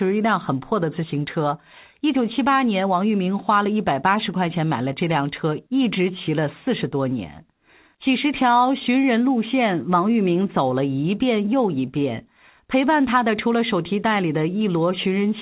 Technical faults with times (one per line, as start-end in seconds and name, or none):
none